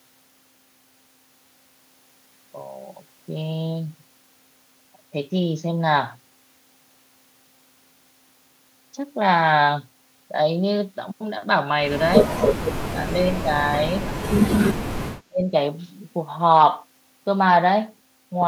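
At 12.82 to 12.99 s the speech abruptly sinks by something like 30 dB, almost vanishing; at 13.44 to 13.64 s there's a much gentler dip of a few dB; then at 15.24 to 15.53 s it drops out hard again, around 30 dB, for roughly a third of a second. That choppy ducking is likely speech suppressed in double talk, where the echo canceller, hearing both ends at once, couldn't tell this talker from loudspeaker echo and squashed everything.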